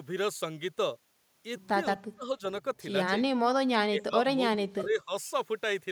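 In this speech recording the talker's level sinks in three places: deeply from 1.98 to 2.42 s, only slightly from 3.07 to 3.2 s, and again steeply, in broken pieces, from 3.86 to 5.13 s. This is likely speech suppressed in double talk, where an echo canceller could not separate the talker from overlapping loudspeaker echo and ducked the talker.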